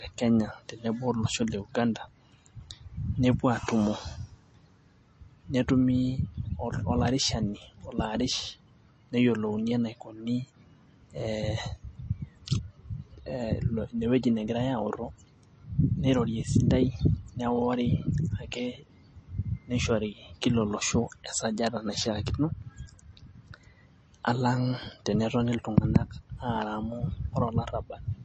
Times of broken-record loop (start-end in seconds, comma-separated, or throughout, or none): none